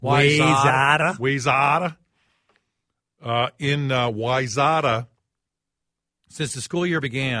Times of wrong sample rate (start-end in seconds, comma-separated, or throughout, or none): 1.02-6.12